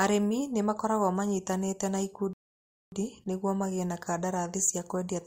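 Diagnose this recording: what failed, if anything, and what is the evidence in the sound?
At the playback stage, the player's buffer ran dry and it paused until more audio arrived: a rebuffering stall. After "nĩ magĩrĩirwo manyitane na" the speech cuts to silence from 2.33 to 2.92 s, then resumes exactly at "nĩguo magĩe na", adding 0.59 s without losing anything.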